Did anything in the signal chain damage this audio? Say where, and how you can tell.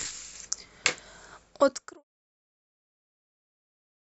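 No; the speech simply fades out by 2.04 s.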